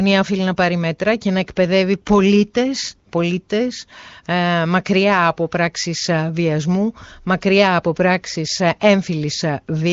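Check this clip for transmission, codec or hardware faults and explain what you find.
No transmission, codec or hardware faults found: the speech sits in an HD Voice wideband band with nothing above 7.2 kHz, and the clarity points to AMR wideband at a high rate of around 23.05 kbit/s.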